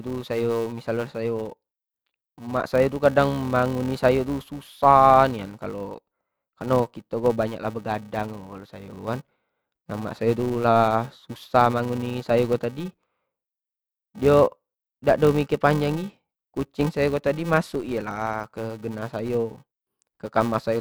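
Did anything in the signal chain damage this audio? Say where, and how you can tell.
Yes: filter restarted on every block, throughout. A level-following 345 Hz buzz suggests a 128-sample buffer stage whose filter restarts from silence each block.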